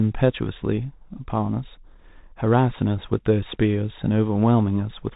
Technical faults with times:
0.00-5.16 Bluetooth CVSD headset codec

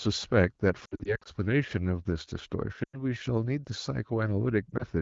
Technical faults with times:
0.85-1.28 lost AMR speech frames
2.83-3.02 lost AMR speech frames
4.69-4.85 lost AMR speech frames

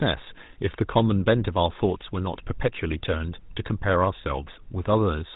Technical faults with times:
0.00-5.36 GSM full-rate codec

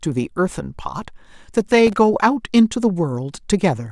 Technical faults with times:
1.87-1.97 processor overload crackle

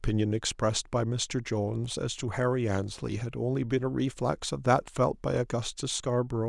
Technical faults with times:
none

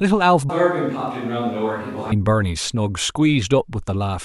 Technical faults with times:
0.50-2.12 switch to a distant microphone

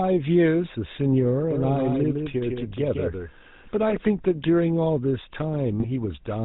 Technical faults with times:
0.00-6.44 GSM full-rate codec
1.51-3.97 doubled audio track
5.80-5.86 GSM bit errors

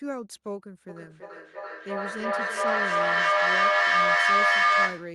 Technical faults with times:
0.89-5.15 feedback echo between two devices

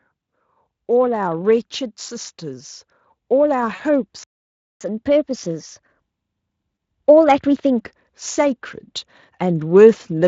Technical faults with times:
1.38 microphone volume stepped up
3.63 microphone volume stepped up
3.75-3.81 VoIP packet loss concealed by the speech codec
4.23-4.81 playback stall
4.81-7.81 catch-up at higher speed
5.31 microphone volume stepped up
6.75 VoIP packet loss concealed by the speech codec

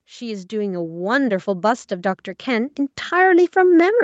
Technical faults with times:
0.05-1.92 automatic gain rising

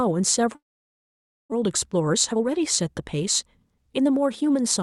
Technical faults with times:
0.55-1.54 long network dropout
1.64-3.22 jitter buffer speed-up
3.64-4.50 jitter buffer speed-up

